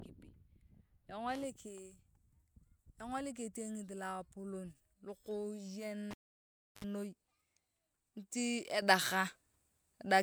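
At 6.11 s the speech cuts out with a pop: the cable was pulled and plugged in. The signal falls to near silence for about 0.69 s, then a 65 ms burst of 50 Hz mains buzz comes before a second pop at 6.85 s. The buzz and the paired pops set it apart from a plain digital dropout. At 8.82 s a sudden gain jump lifts speech and background noise together by about 8 dB, and the new level lasts to the end. The change is instant and the noise floor rises with the speech, so it is not a fade or compressor action. The likely cause is a digital gain step applied without a ramp.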